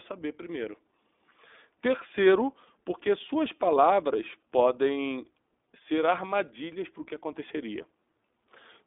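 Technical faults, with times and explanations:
Throughout, iLBC codec: the speech sits in a telephone band of 250 Hz to 3.6 kHz, with nothing above 3.8 kHz, and the codec damage is plainly audible as a rough, slightly synthetic edge. The excitation of each 20 ms frame is coded on its own, and the quality fits the 15.2 kbps mode. On a spectrogram the energy stops at a hard ceiling near 3.8 kHz, with empty space above and grainy, smeared harmonics below.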